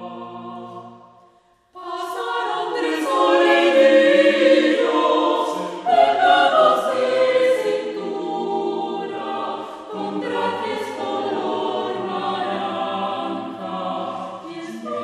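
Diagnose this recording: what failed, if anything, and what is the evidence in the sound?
Nothing in the signal chain appears to have failed: the recording holds steady throughout, with no audible disturbance at any stage from capture to playback.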